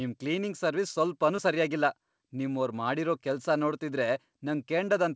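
Short concealed packet loss at 1.36–1.40 s in this speech clip: about 20 ms of call audio arrived too late, so the receiver extended the preceding sound across the gap and crossfaded back, leaving a brief smear. The band stops at 8 kHz throughout, which fits a wideband call codec such as G.722.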